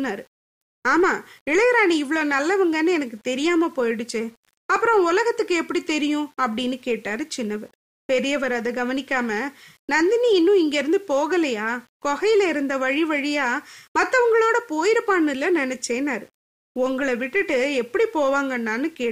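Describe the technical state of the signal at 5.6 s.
At 5.6 s the speech carries grainy distortion that tracks its level, present throughout the clip, likely low bit depth without dither. Rounding to few steps, consistent with 8 bits, leaves error roughly 40 dB down; waveforms look stair-stepped, quiet parts sputter, and spectrograms show signal-dependent broadband hash.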